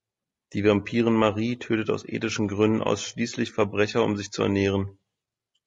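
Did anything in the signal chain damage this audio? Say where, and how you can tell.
Yes, and it's at the codec stage, running the whole way through the speech. The voice sounds rough and grainy, with a hiss filling in between the harmonics and a top end that feels thinned or a bit synthetic. That's the signature of low-delay AAC compression, likely AAC-ELD at a low rate, plausibly around 32 kbps. At that rate bits run out, so the encoder papers over the gaps with noise.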